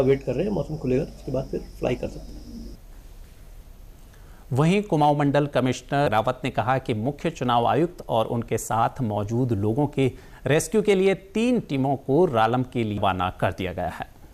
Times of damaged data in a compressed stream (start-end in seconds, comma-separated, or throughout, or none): 6.06, 12.97